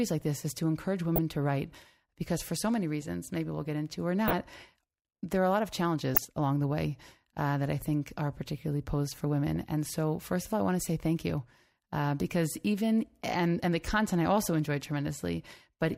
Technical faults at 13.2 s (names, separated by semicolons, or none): dropped buffer (overrun)